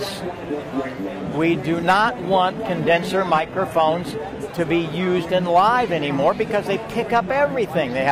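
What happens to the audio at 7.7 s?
Nothing goes wrong at 7.7 s; the audio plays through that moment intact, with no dropout, click, glitch or other fault to be heard.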